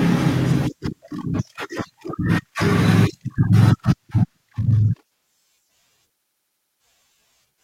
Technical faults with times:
none

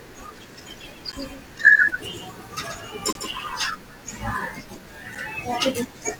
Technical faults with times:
0.62-3.58 doubled audio track
1.12 gap between stream segments
3.13-3.15 gap between stream segments
5.15 gap between stream segments

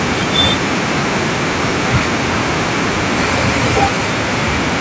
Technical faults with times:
none

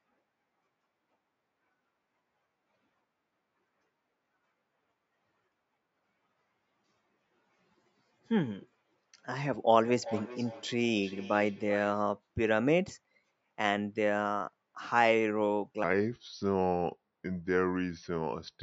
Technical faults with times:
9.84-12.10 feedback echo between two devices
15.84-18.63 section at the wrong speed

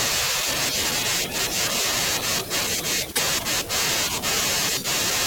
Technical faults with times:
3.12-3.19 damaged data in a compressed stream

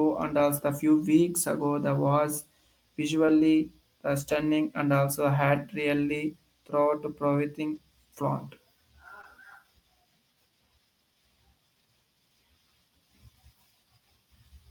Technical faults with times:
0.67-0.69 lost packet rebuilt from error correction
2.07-2.09 lost packet rebuilt from error correction
3.25-3.29 short concealed packet loss
3.27-3.29 lost packet rebuilt from error correction
5.55 lost packet rebuilt from error correction
7.75 lost packet rebuilt from error correction
9.21-9.25 short concealed packet loss
9.23-9.25 lost packet rebuilt from error correction

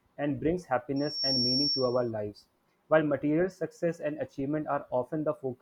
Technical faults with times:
0.96-2.11 loudspeaker feedback squeal

